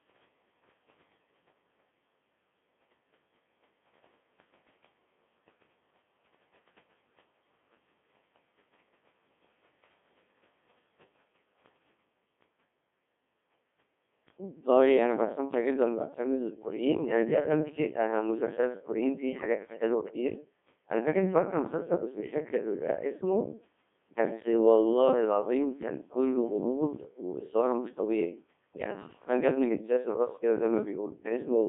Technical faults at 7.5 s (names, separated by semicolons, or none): Codec 2 vocoder